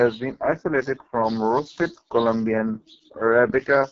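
From start to finish the speech carries AMR wideband (HD Voice) codec damage. It is heavily rough and raspy, which fits the lowest 6.6 kbit/s rate. Unlike narrowband phone coding, the band reaches up to about 7 kHz, with noise-like hiss standing in for detail above 6.4 kHz.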